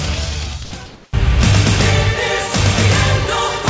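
From 0.86 to 1.13 s, the real background in this audio gives way to a steady, featureless hiss that shifts the level by about 2 dB. That is comfort noise in place of the background, likely from discontinuous transmission on the call path, which carries nothing above 8 kHz.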